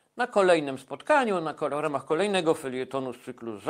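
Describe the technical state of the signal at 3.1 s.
The speech at 3.1 s is intact, with no audible technical fault at that moment.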